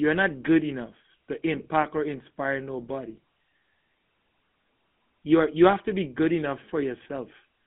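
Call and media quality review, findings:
Buzzy, gravelly roughness on the speech for the full clip, with a boxy, narrow tone. Band limited to roughly 150 Hz to 3.5 kHz, nothing above. Probable component: GSM full-rate codec on the call leg, which fits a 13 kbps stream. Mechanism: vocal-tract model excited by a sparse, regularly spaced pulse train, keeping only a fraction of the excitation samples. That coarse excitation gives the plainly audible rasp.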